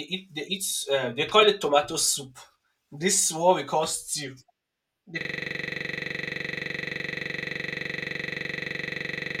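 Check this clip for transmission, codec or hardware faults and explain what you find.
One fault is present. From 5.21 s to the end, there is a system hang loop. A frozen system keeps replaying one 42.67 ms buffer, heard as a steady 23.4 Hz buzz.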